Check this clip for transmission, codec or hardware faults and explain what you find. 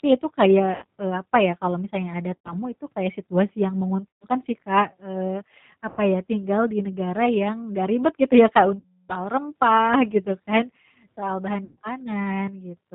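Two faults are present in this speech: a low-rate speech codec across the whole clip, and six short dropouts hidden by that codec's loss concealment.

G.729 codec, throughout: the sound is rebuilt from a vocal-tract filter, a pitch predictor and a handful of pulses per frame rather than carried as a waveform, which fits an 8 kbit/s G.729A stream. The damage is plainly audible. Nothing above 4 kHz survives, so the voice is dull and boxy, and the sparse pulse excitation leaves it slightly rough and synthetic.

VoIP packet loss concealed by the speech codec, at 0.76 to 0.85 s (after "itu kayak", before "eee apa ya kalau"), 2.36 to 2.55 s, 4.10 to 4.25 s (after "itu kayak situasi yang"), 5.89 to 6.00 s (before "ya tinggal di negara"), 8.79 to 9.13 s and 11.65 to 11.78 s. The missing stretches last 60, 90, 120, 90, 300 and 120 ms, which points to 30 ms packets. At each gap the decoder keeps repeating its last pitch and filter at falling gain, so the voice smears into a buzzy tone or coloured noise that fades. 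Because each frame depends on the one before, the sound stays weak and distorted briefly after it returns.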